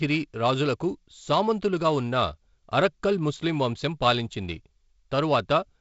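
No technical faults can be heard anywhere in the speech. It carries the sound of G.722 wideband telephone coding at 48 kbit/s, with content stopping at about 7.7 kHz and a light grain from the reduced bits in the lower band.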